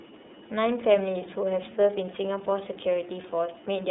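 The speech has been carried through the iLBC codec for its whole length, most likely in its 30 ms frame mode at around 13.3 kbps. Each frame's excitation is coded on its own, without reference to the frame before, so the sound turns audibly rough and slightly synthetic. Everything outside a narrow line band from 250 Hz to 3.7 kHz is missing, which leaves the voice thin and boxy.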